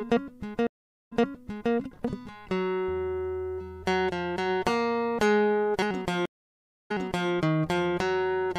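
At 0.67 s and again at 6.26 s the music hits a stream reconnect: the connection drops, the player goes silent and restarts decoding mid-stream. The gaps last 440 ms and 642 ms, then playback resumes about 0.63 s and 0.42 s earlier, so passages repeat. Waveform and spectrogram show flat blank stretches, then restarts that fade in.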